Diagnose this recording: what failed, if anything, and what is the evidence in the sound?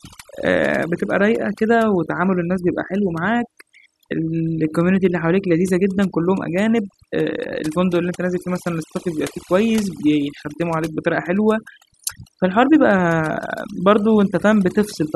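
Overdone noise removal in the call-processing stage, throughout: gaps fall to near silence with twinkling specks as weak bands are gated out.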